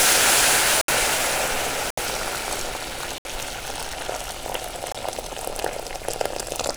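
The sound drops out four times into a block of digital silence. The first three come at 0.81, 1.90 and 3.18 s, each about 70 ms long. The fourth, at 4.92 s, is shorter, about 23 ms, which fits a 1024-sample buffer. The longer gaps match three such buffers. Each time, the output was likely not filled in time and zeros went out instead. The audio stops dead and returns with no fade, leaving a short hole.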